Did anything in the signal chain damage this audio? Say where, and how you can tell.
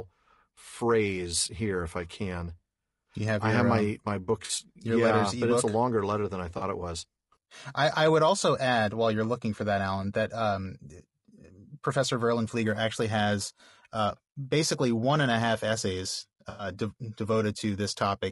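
Yes, at the codec stage, in two ways. Throughout, the speech is rough and grainy, with noise filling the gaps between pitch harmonics and a thin, synthetic-sounding top band. The damage is plainly audible. This is likely low-delay AAC compression (AAC-ELD) at a low rate, around 32 kbps. Its short frames resolve harmonics poorly, so the graininess is steady and spectral rather than the bursty breakup of packet loss.

On top of that there is AAC frame loss with concealment at three points: 4.45 to 4.51 s, 6.57 to 6.63 s (after "longer letter than I", before "it was"), and 16.49 to 16.67 s (after "and a half essays"). Each is a smeared, noisy or phasey patch where the decoder rebuilt sound from the last good spectrum. The first two fit about two lost frames and the third about five. Unlike a dropout or clipping, there is no hard silence or click, only a blurred stretch of filled-in audio.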